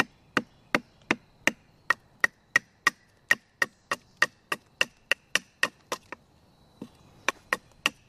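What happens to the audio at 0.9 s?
Nothing goes wrong at 0.9 s; the audio is intact at that moment, with no dropout, click, distortion or other fault.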